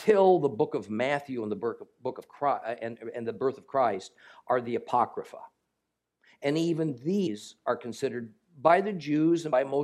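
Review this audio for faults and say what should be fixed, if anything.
There are two spots where compressed frames get skipped, at 7.26 s and 9.52 s. The audio jumps ahead, roughly a tenth of a second at the first and about half that at the second, which fits a few whole 24 ms frames going missing. Those frames were either missing from the file or refused by the decoder as damaged, so they never play. To fix it, check the file's integrity and re-encode or re-transfer it from a clean source.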